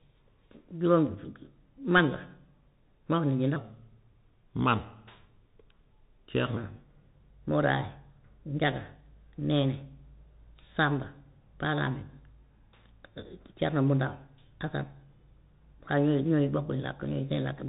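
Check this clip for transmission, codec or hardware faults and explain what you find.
Two faults are present: a narrowband Bluetooth codec across the whole clip, and one stretch of speech played too slowly.

Bluetooth CVSD headset codec, throughout: CVSD sends one bit per sample saying step up or step down, with an adapting step size, which fits a 64 kbit/s link. Nothing above 3.8 kHz survives, so the speech sounds muffled. Sharp loud sounds overrun the step and distort, s sounds come out scratchy, and a granular hiss sits underneath.

Section at the wrong speed, 3.56 to 6.57 s: this stretch plays at 0.806 times its proper speed, so pitch and tempo fall together by about four semitones. The voice turns deeper and draggier, then snaps back at 6.57 s. The likely cause is that this segment was resampled or played against the wrong clock.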